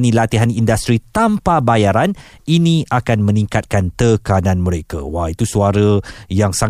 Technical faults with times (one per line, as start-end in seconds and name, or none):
none